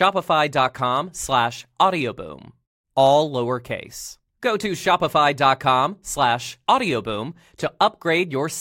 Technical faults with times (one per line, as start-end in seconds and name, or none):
none